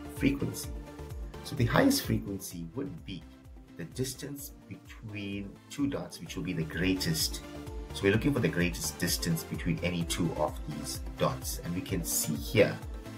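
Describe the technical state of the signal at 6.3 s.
At 6.3 s you're right inside a stretch of zipper noise, 6.12 to 6.98 s. The level moves in unsmoothed 2 dB jumps, about seven a second, so each step clicks and the roughly 10 dB change comes across as a quick ticking zip.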